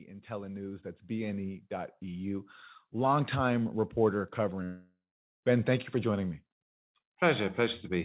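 Automatic gain rising happens from 0.27 to 1.61 s and again from 2.21 to 3.84 s. Each time the gain control judged the input too quiet and lifted its level gradually, by about 5 dB and then about 4 dB. The speech and the background noise swell together over more than a second.

A long network dropout runs from 4.64 to 5.43 s. The sound turns into a fading buzz, then goes silent for 0.4 s. The speech comes back with 0.78 s missing. The likely cause is that packets stopped arriving and the receiver filled the gap. Throughout the clip nothing is heard above 4 kHz, which fits a narrowband G.711 call codec at 64 kbps.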